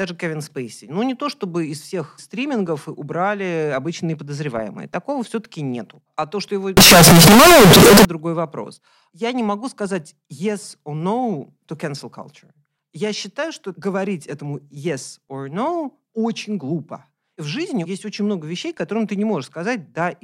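From 6.77 to 8.05 s, between "то что его" and "другой вопрос", float read as integer, likely 32-bit float read as integer: a harsh, near-square blast at an almost fixed, high level. Unlike clipping, background noise rises to speech level, yet pitch survives.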